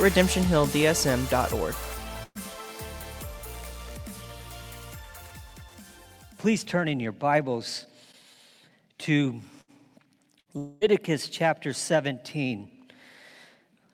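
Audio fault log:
2.23–2.38 s, 9.61–9.71 s, 10.40–10.49 s, burst of packet loss: about 120, 60 and 60 ms of audio vanish, replaced by the last sound stretched and faded. Only the first decays into about 30 ms of silence.
10.58–10.84 s, long network dropout (likely cause): about 240 ms goes missing, and the fading continuation fills nearly all of it without reaching silence. It is set apart from the bursts by its length, roughly two to four times theirs.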